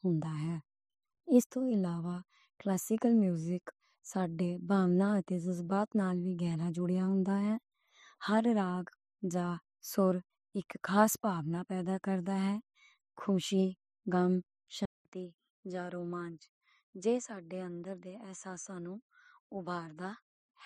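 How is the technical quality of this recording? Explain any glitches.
The recording has one clear glitch, in its last stretch. At 14.85 s the speech cuts out for about 200 ms, then returns roughly 10 dB quieter and duller, with nothing above 9.6 kHz and a faint new background hiss well under the speech, and it stays that way to the end. This is likely an input switched to a poorer device: the system changed its input mid-recording, and the replacement passes a narrower band and brings its own level and noise.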